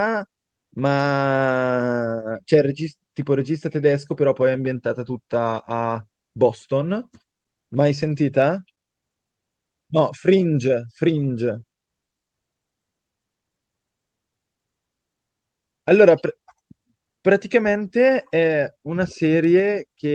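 At 1.69 s, 7.97–8.19 s and 18.35–18.57 s, lost packets are rebuilt from error correction. The Opus decoder plays low-bitrate copies carried in the following packets, so nothing drops out, but those stretches sound rougher and noisier. The longer two fit runs of six 20 ms packets.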